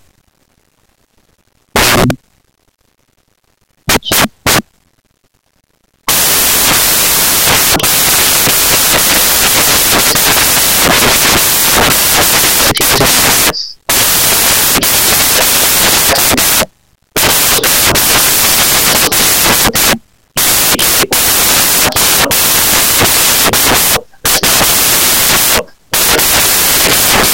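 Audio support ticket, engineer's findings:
Sample reader misassembling bytes: off by one byte, swapped byte order or wrong alignment, across the entire clip. Fast-changing low bits land in the high positions, so samples built from the wrong bytes give loud, harsh broadband noise throughout, close to white on the louder speech.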